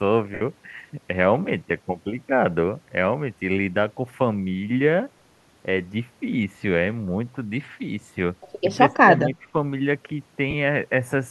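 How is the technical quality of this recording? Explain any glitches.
The recording has three audible glitches of two kinds, with light codec coloring underneath that counts as ordinary compression rather than a fault.

Lost LE Audio frames, at 0.34 to 0.42 s (about 68 ms) and at 10.51 to 10.54 s (30 ms). Frames of the Bluetooth LE Audio stream went missing, and the LC3 decoder filled each gap by replaying the last good spectrum with randomized signs. The longer gap is consistent with a run of 7.5 ms frames, long enough for that concealment to start fading. The speech briefly turns into a grainy, noisy smear that sags in level. The shorter gap is only a quick rough blip.

Speech suppressed in double talk, from 8.87 to 9.55 s. The talker's level drops by roughly 10 dB in patches adding up to around a third of a second, so the speech dips in bursts rather than staying steady. The likely cause is an echo canceller meeting simultaneous talk from the far end. 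Unable to separate the near voice from loudspeaker echo, it turned both down together.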